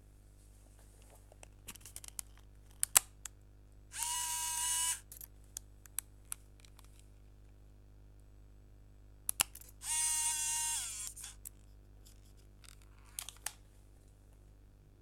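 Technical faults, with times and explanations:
4.14 s and 11.06 s, compressed frames skipped: at each point the audio jumps forward, losing roughly 70 ms at the first and around 30 ms at the second. That fits a few whole compressed frames going missing or being rejected by the decoder as damaged.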